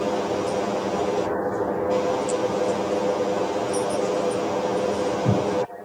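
Channel delay (comb filtering) runs throughout the audio: one channel arrives roughly 10 ms late, and when the two are summed to mono, shared content cancels at evenly spaced frequencies, from around 50 Hz upward, leaving a hollow, phasey sound.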